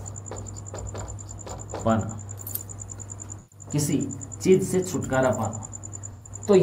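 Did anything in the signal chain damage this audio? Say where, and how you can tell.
Yes, the damage is at the codec stage: AAC frame loss with concealment. Two brief smeared, noisy and phasey patches appear, from 3.39 to 3.66 s and from 6.12 to 6.30 s. Each covers about 128 ms of missing data, which fits three lost frames. The decoder rebuilt the gap from the last good spectrum with randomised phase, so the audio blurs instead of cutting out, then recovers.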